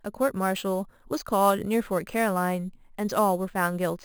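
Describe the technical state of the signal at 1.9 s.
At 1.9 s the speech carries imaging from sample-and-hold upsampling, present across the whole clip rather than at this moment alone. The sound points to audio at about 11 kHz raised to 48 kHz by repeating each sample without an interpolation filter, so mirrored copies of the spectrum remain. The first image spans roughly 5.5 to 11 kHz at about -18 dB relative to the signal. It is heard as a bright metallic fizz whose level follows the speech.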